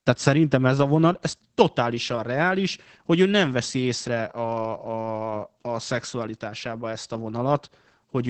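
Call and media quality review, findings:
Opus voice compression, whole clip: speech muffled, hoarse, faintly robotic. Wideband SILK coding caps content at 8 kHz and quantises excitation coarsely, which fits about 12 kbps. Unlike plain low-pass filtering, the rough, buzzy texture marks codec damage, not just lost treble.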